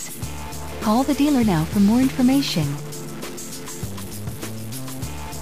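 Harsh, buzzy distortion runs through the whole recording, with pauses filled by noise: a stuck bit, likely one data line held fixed, erring by about -30 dBFS.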